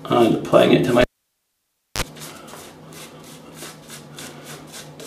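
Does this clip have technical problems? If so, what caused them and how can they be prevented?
Yes. A live cable was pulled and plugged in again from 1.01 to 2.02 s. It gives a pop, 0.95 s of near silence, a 36 ms burst of 50 Hz mains buzz while only the tip touched, then a second pop as sound returns. Muting the channel before touching connectors prevents this.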